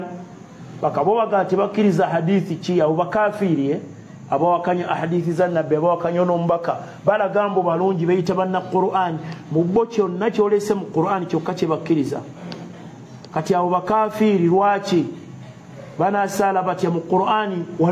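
No technical faults can be heard at any point in the audio.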